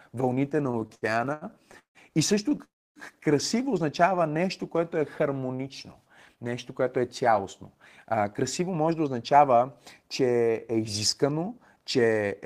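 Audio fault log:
0.49–2.61 s, repeated stalls (stutter): The speech catches and drags again and again, with 13 short holds where the last sound is stretched out, the longest about 160 ms. Together they add about 466 ms, roughly a fifth of this stretch, and nothing is lost. Packets were arriving late or more slowly than playback used them, so the jitter buffer kept running dry. Each time, the receiver extended the last sound until fresh audio came in.
2.64–2.99 s, call audio freeze: The sound hangs for a moment as a brief fading tail, then drops to silence for about 280 ms before continuing from exactly where it stopped. About 315 ms has been inserted in total, with nothing missing, and playback runs that much later from here on. The likely cause is that packets were held up in transit and emptied the jitter buffer, and the receiver filled the wait until they arrived.
4.02–5.58 s, jitter buffer slow-down: The speech becomes slightly slower and more drawn out while the pitch stays the same. 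It runs at about 93% of normal speed, adding about 123 ms across the stretch. The jitter buffer was low or had raised its target delay. To rebuild a reserve, the receiver repeated single pitch periods and small slices of pauses many times over, which lengthens the sound without lowering it.
7.32–12.15 s, jitter buffer speed-up: Starting just after "нещо което е", the speech sounds hurried, running at about 107% of normal speed with unchanged pitch. Roughly a third of a second is taken out over this span. The jitter buffer was holding more audio than it aims for, as happens when delayed packets arrive together. To cut the delay, the receiver trimmed out short pieces of one or a few pitch periods repeatedly, which compresses the timing.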